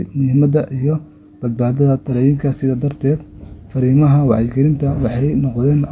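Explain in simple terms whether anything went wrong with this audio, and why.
Listening to the recording, nothing stood out as having gone wrong.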